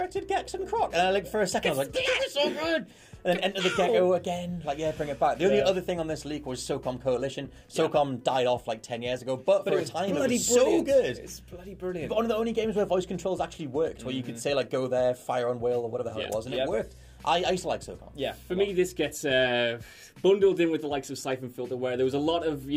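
No technical faults can be heard anywhere in this recording.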